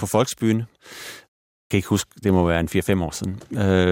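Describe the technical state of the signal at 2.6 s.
At 2.6 s the speech signal is intact, with no fault audible at that moment.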